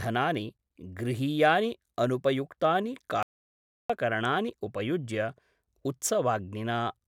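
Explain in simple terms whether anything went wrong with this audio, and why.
Just after "गृहीयानि अनुपयुक्तानि", the speech stops dead at 3.23 s and returns at 3.90 s. This is an audio dropout to silence, likely from a briefly lost input. Unlike a natural pause, which keeps faint room sound, these two-thirds of a second are totally empty, and whatever was said there is gone.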